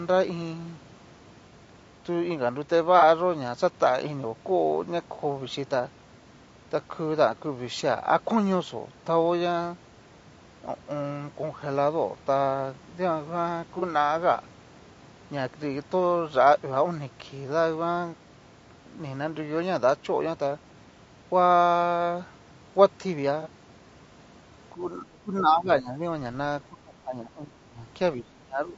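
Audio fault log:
Throughout, low-delay AAC compression. The speech sounds rough and grainy. A noisy haze sits between the harmonics, and the top band sounds thin and partly synthetic. This is likely AAC-ELD, the low-delay coder of video calls, at a bitrate near 32 kbps. Its frames are very short. Short frames resolve voice harmonics poorly and get fewer bits each. At this rate the damage is plainly audible.
1.49–1.53 s, 2.99–3.03 s, 13.79–13.83 s and 23.42–23.47 s, AAC frame loss with concealment. Each is one lost frame of about 30 ms. The decoder rebuilds the gap from the last good spectrum. It reuses the energy but scrambles the fine detail. So each spot is a brief smeared, noisy or phasey patch. None lasts long enough to fade toward silence.
24.74–26.02 s, 26.68–27.81 s and 28.16 s to the end, speech suppressed in double talk. The voice dips sharply, about 15 dB down at worst in the first stretch and about 20 dB in the later two. 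Each stretch loses most of a second. The likely cause is an echo canceller facing both sides talking at once. It cannot separate its own talker from the loudspeaker echo, so it turns both down.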